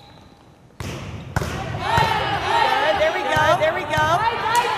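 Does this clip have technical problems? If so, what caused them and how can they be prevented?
Yes, a doubled audio track runs throughout: an equally loud, dry copy trails the sound by about 0.7 s, likely from a second, slower capture path. Prevent it by routing the source through only one input.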